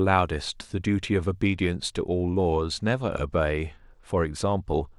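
From about 1.44 s to the end, the speech goes through a Bluetooth SBC bit pool drop: the link seems to have congested and the encoder cut its bit budget, which fits a fall from bit pool 31 to about 15, around 105 kbps. Treble dulls and gritty noise creeps in.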